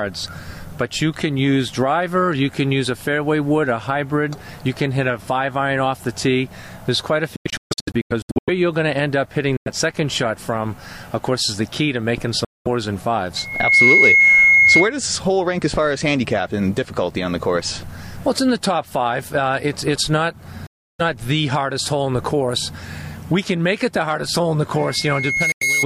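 From 7.36 to 8.50 s the sound breaks into a cluster of silent gaps, about 0.7 s missing in total, with the longest single gap 139 ms. These are Bluetooth dropouts, likely caused by packets reaching the headphones too late and being discarded. Each time, the sound returns further on, as though it had kept playing. Shorter holes follow at 9.57 to 9.68 s and 12.45 to 12.68 s.

At 13.36 s a loudspeaker feedback squeal appears. The microphone picks up its own loudspeaker, and the loop gain at 2.2 kHz exceeds one, so a single tone swells within roughly 0.4 s to about 10 dB above the sound and lasts until 14.94 s.

Another dropout silences 20.67 to 21.01 s. The squeal returns at the same 2.2 kHz from 24.78 s to the end, building more slowly and peaking about 5 dB above the sound, and a final dropout cuts 25.52 to 25.63 s.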